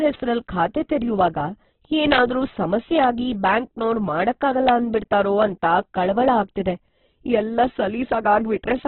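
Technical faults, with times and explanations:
Throughout, Opus compression: The speech sounds rough and grainy rather than swirly, and nothing is heard above about 4.2 kHz. This narrowband sound comes from an encoder starved of bits. It keeps the energy of each band but fills the detail with folded or noise-like content, so voiced sounds turn noisy and gritty. The damage is heavy and points to a rate near 8 kbps. The likely cause is Opus running in its music (CELT) mode.
0.15 s, 2.12–2.18 s, 3.03 s, 4.69 s and 5.42 s, integer overflow: Each is a violent crack, far harsher than clipping. The first comes just before "ಖಾತೆ ತೆರ್ಯುವಾಗ", the third just before "ಆಗಿ ಬ್ಯಾಂಕ್ನೋರು ಮಾಡಕ್ಕಾಗಲ್ಲ", and the last just before "ಅಂತ ಕಳವಳ ಆಗ್ತಿದೆ". The level reached the integer limit and wrapped to the opposite sign instead of being held. Most peaks only just touch the limit. The longer event at 2.12 s pushes about 3 dB past it, so more samples flip across the full range.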